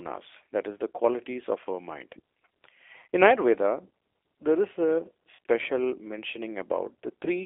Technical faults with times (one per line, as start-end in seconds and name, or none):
0.00-7.46 G.729 codec
5.35-5.38 VoIP packet loss concealed by the speech codec